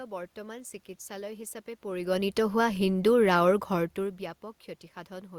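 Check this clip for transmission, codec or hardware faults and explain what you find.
No transmission, codec or hardware faults found; the room noise is part of the recording, and the level changes around 1.5 s and 3.5 s are the talker moving relative to the microphone.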